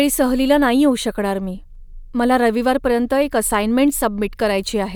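Listening through the speech recording, nothing stood out as a technical problem.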